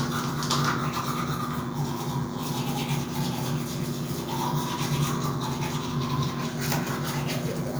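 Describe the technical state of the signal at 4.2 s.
At 4.2 s, as throughout the clip, DECT cordless phone buzz sits about 15 dB under the sound: rectified 100 Hz radio bursts give a thin buzz, drawn on a spectrogram as evenly spaced harmonic lines.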